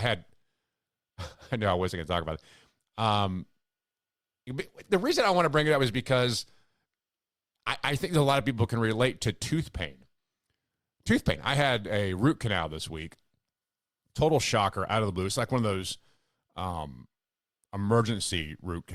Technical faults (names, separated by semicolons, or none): none